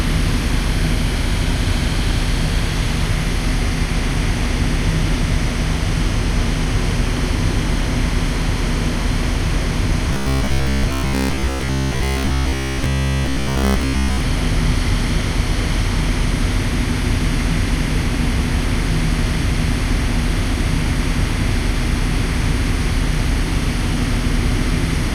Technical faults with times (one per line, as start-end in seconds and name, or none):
10.13-14.21 robotic sound from repeated short buffers